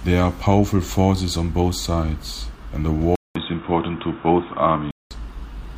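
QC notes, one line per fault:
3.16 to 5.11 s, input switched to a poorer device: the recording most likely changed over to a different, narrower-band input partway through, then returned to the original at 5.11 s. The switch opens with a gap of about 200 ms. The speech then turns dull and boxy, with nothing above 3.8 kHz, and new background noise sits around 30 dB under the voice. Loudness stays roughly the same, so the change is heard as tone rather than level.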